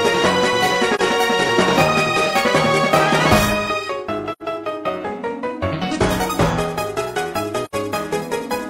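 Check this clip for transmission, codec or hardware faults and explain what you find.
Three short dropouts, all the same fault. AAC frame loss with muting occurs at 0.95 s, 4.32 s and 7.65 s. The decoder received nothing for those frames and zeroed their spectrum. The overlapping windows fade the sound down and back up, leaving soft-edged gaps of roughly 43 ms, then 85 ms twice, which fits one and two missing frames.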